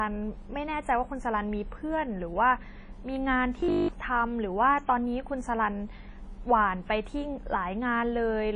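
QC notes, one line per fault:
Throughout: WMA compression. The speech has a ringing, washy quality with hiss that swells and fades with the level, and nothing is present above 10 kHz. This is plainly audible codec damage, likely from a transform codec using long blocks at a low rate, consistent with about 32 kbps. Quantisation noise smears over tens of milliseconds around each sound, and weaker spectral detail is discarded, leaving a thin, watery top end.
3.60 to 3.90 s: robotic sound from repeated short buffers. For about 0.3 s the speech turns into a rigid, metallic buzz at 50 Hz that tracks the original only loosely. Audio was likely arriving too seldom, so playback kept looping the last 20 ms of sound instead of advancing. Most of this stretch, roughly two thirds or more, is repeated material. That fixed 50 Hz repetition skips the real audio underneath.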